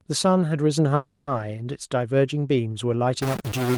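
A short speech recording with two faults. From 0.95 to 1.30 s there is a call audio freeze: the last sound is held as a fading buzz or hiss for about 320 ms, then speech resumes where it stopped with nothing lost, so everything after runs about 320 ms late. Likely cause: delayed packets emptying the jitter buffer. From 3.22 s to the end, added noise or distortion points to a stuck bit, likely one data bit fixed at 0 or 1, which throws off roughly half the sample values.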